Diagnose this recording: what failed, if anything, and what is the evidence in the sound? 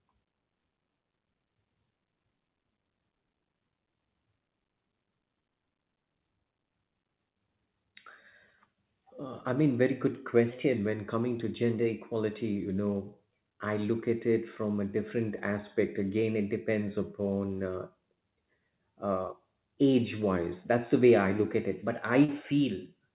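A brief smear from 22.24 to 22.29 s, where the sound is stretched from what came before, then blends back. This is short concealed packet loss at the network stage. About 40 ms arrived too late, and the receiver extrapolated the last sound to fill it.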